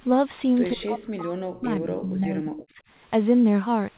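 From 0.72 to 2.78 s the speech repeatedly dips, thins and drops out in pieces, falling by about 40 dB at its deepest across roughly two seconds. This is likely speech suppressed in double talk: with both sides talking, the echo canceller turned the near talker down along with the echo.

During that stretch, a faint delayed copy of the voice slips through at 1.54 to 1.60 s, about 30 dB below the speech, and again more audibly at 2.55 to 2.63 s, about 20 dB down. Both trail the original by 125 ms, which likely points to echo leak from a loudspeaker the canceller did not fully remove.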